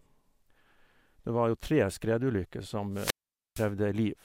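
A wireless microphone squelch dropout occurs from 2.92 to 3.70 s: the radio link fades, squelch mutes about 460 ms after rising hiss, then speech returns.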